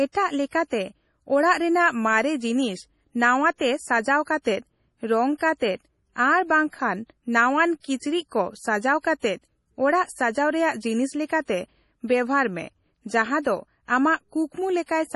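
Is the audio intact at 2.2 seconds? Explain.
No. At 2.2 seconds, as throughout the clip, the speech carries heavy MP3 compression damage, likely from an encoder starved of bits, which fits a rate around 32 kbps. It cuts everything above 11.5 kHz and drops weak frequency lines frame to frame, leaving a dull, watery, swirling sound with smeared consonant onsets.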